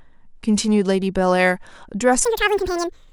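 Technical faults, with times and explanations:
2.25–3.12 s, audio read two samples at a time (double speed): from here to the end the speech suddenly races along at twice the rate and jumps a full octave (12 semitones) up, giving that chipmunk quality. The reader's treating each pair of samples as a single frame, as if it expected two channels or samples twice as wide, so it burns through the audio twice as fast.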